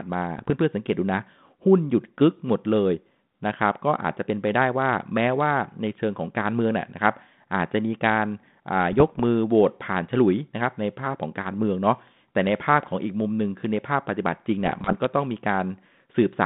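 At 0.38 to 0.51 s, 8.92 to 9.21 s and 14.64 to 14.95 s the speech breaks into pops and rough, gritty bursts with brief jumps in level: bit errors on an ADPCM link, at a rate of a fraction of a percent. A flipped bit misleads the decoder's step size and predictor, so each hit rings on for milliseconds. Packet loss would leave gaps or smeared repeats instead. The band-limited line, which fits 32 kbit/s G.726, carries light codec roughness.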